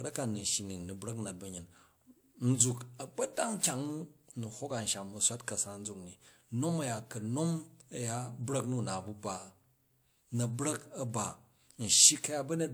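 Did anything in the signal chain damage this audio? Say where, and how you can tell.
Yes. At playback, a disc blemish destroyed more data than error correction could rebuild on each revolution, so the player concealed the gaps. This produces CD scratch ticks: five clicks of a couple of milliseconds at most, about seven per second, at 3.81–4.53 s and 8.90–9.62 s.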